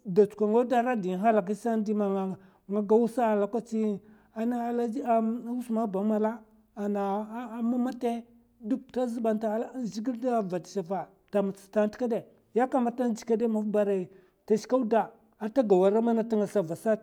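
Nothing stood out as a technical fault on listening to the speech.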